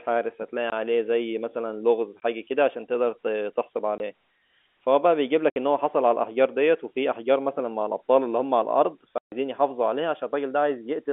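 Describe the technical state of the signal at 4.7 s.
At 4.7 s the speech is intact, carried over a G.711 telephone line whose band of roughly 250 Hz to 3.4 kHz gives it the usual narrow, phone-like sound.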